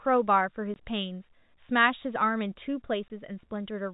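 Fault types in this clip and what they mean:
Packet loss filled with silence: two 20 ms holes cut the speech, at 0.74 s and 3.08 s, each fitting one lost 20 ms packet. The gaps go fully dead with hard edges, unlike concealment, which would smear or repeat sound.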